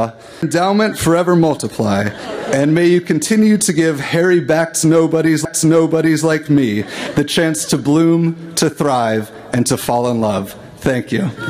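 At 0.42 s and again at 5.45 s the laser is thrown off its track and lands on another turn of the disc's spiral: a CD skip. Each time the player mutes for only a few milliseconds while it relocks, which comes across as a small tick, and then playback resumes from a different point on the disc. The audio therefore lurches abruptly, with a short stretch of material either dropped or repeated.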